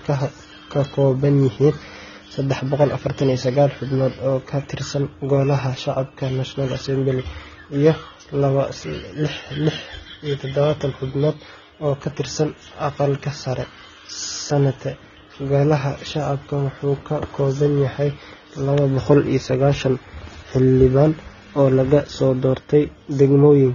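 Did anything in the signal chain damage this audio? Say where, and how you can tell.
Yes. Transcoding between lossy codecs runs throughout the speech, at the codec stage. Nothing sounds above 6.9 kHz, and two kinds of coding damage sit on top of each other: the artefacts of the first codec and those added by the second. The likely cause is a low-rate HE-AAC encode re-encoded to AAC-LC at around 24 kbit/s. The second encoder spent its bits on the first one's artefacts and added its own, and the lower cut-off remained.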